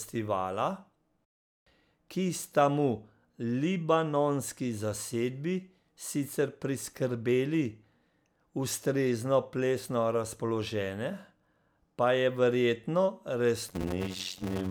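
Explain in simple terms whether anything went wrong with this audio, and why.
Something goes wrong near the very end, from about 13.68 s until the clip stops at 14.70 s. This is a block size mismatch (padded). One stage hands over smaller chunks of sound than the next stage expects. That fits chunks of 256 samples. The missing part of each chunk is filled with silence. Those tiny gaps repeat about 92 times a second, which makes a buzz. The speech also drags to about half speed, though the voice keeps its character.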